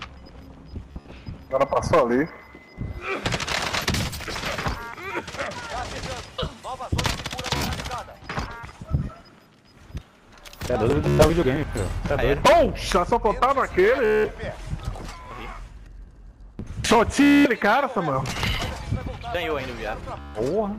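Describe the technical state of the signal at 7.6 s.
Bluetooth stutter spans 7.47 to 7.66 s. Lost packets make the receiver replay its last slice, giving a brief buzzing stutter with 70 ms of sound skipped.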